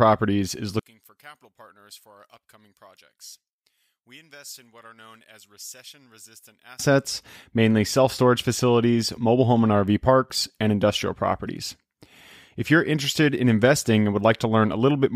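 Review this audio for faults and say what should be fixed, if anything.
One channel inverted, from 0.79 s to 6.79 s: the speech drops by about 27 dB and turns faint. This is likely caused by one stereo channel having reversed polarity. When the channels are folded to mono, the material common to both, including the centred speech and its low end, cancels out. Only the small difference between the channels survives. To prevent it, check polarity on both channels and confirm mono compatibility before mixing down.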